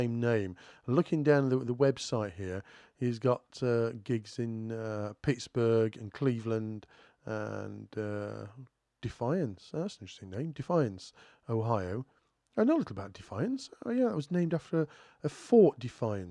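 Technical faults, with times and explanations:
No technical faults heard.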